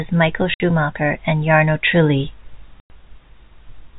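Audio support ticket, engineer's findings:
Packet loss filled with silence: hard-edged dropouts in the speech at 0.54–0.60 s (60 ms) and 2.80–2.90 s (100 ms). Gap lengths fit 10 ms packets. Receiver inserts silence, no concealment. G.711 band limit to 4 kHz audible throughout.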